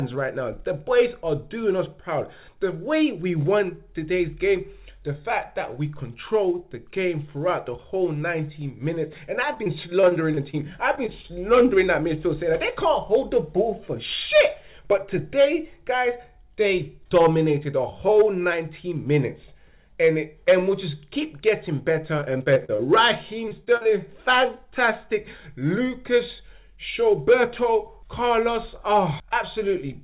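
From 9.54 to 10.55 s there's a burst of repeated packet loss (robotic sound): seven short dropouts, none longer than about 24 ms, each patched by stretching the last bit of audio, so the passage goes choppy. Right after, three short concealed packet losses land at 10.95–10.99, 11.07–11.10 and 11.22–11.26 s. Each is a 20 ms hole bridged by continuing the previous sound and blending back, heard as a quick smear or wobble. The robotic chop returns at 22.20–22.81 s (seven gaps, up to about 37 ms) and 23.49–23.87 s (four gaps, up to about 41 ms). About a quarter of each stretch is filled-in audio, so the choppiness is heavier there. All of it sits in a narrow band, nothing above 4 kHz, which fits a G.711 call path.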